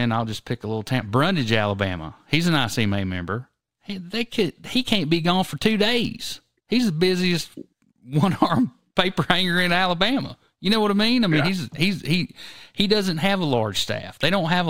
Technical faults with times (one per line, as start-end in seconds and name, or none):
0.00-14.69 imaging from linear upsampling